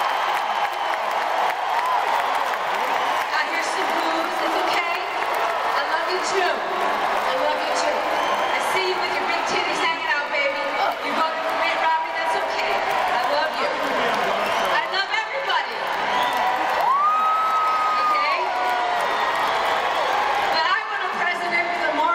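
Nothing goes wrong anywhere in the recording, so there's no technical fault to point out.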